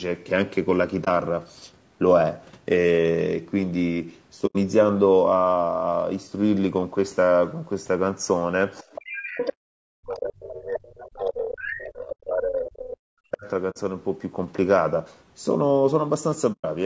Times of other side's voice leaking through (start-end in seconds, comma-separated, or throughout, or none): 8.80-9.51, 10.99-11.23, 11.55-12.15